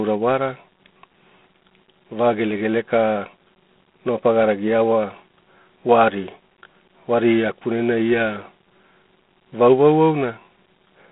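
Throughout, the speech has G.726 ADPCM damage: a harsh, rasping hiss that rises and falls with the voice, fitting 24 kbit/s. Unlike steady background noise, it tracks the speech level. Nothing passes above 3.9 kHz.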